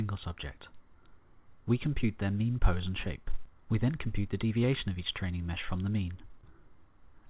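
Nothing goes wrong anywhere in this one; it just has that narrowband telephone-call sound with nothing above 4 kHz, which fits a G.711-style codec on a call path.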